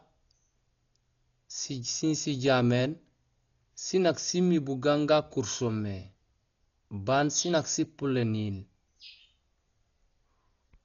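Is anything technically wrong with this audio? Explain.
Yes. Heavy lossy coding damage runs through the whole speech clip. Nothing is present above about 6.9 kHz, so the speech sounds dull and muffled. Tones carry a rough, fluttering noise around them. The likely cause is Dolby Digital compression at a very low bitrate, around 40 kbps. At that rate the encoder narrows the band. It also leaves many frequency lines without real detail, and the decoder fills those gaps with noise.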